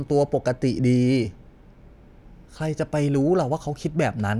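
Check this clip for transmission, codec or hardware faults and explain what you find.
I find no faults to explain in this clip.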